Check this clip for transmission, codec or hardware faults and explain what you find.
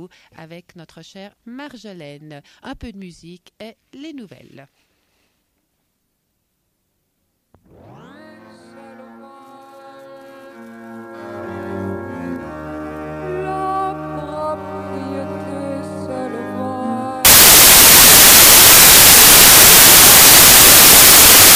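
One fault, and it's hard to miss. From about 17.25 s to the end, the samples are built from the wrong bytes: the reader misaligns or swaps byte order, so the jittery low bits land in the high positions. It comes out as loud, harsh broadband noise.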